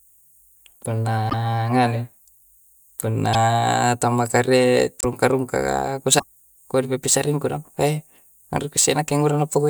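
At 1.29 to 1.34 s, 3.33 to 3.35 s, 5.01 to 5.05 s and 6.18 to 6.23 s the speech skips forward with a short corrupted patch lasting about one to two 24 ms frames. This is likely a broken MP3 bit reservoir. Frames were lost, so the frames that follow reach back for borrowed data and decode bytes belonging to other frames. The result is a jump in the audio and a brief garbled disturbance before clean decoding resumes.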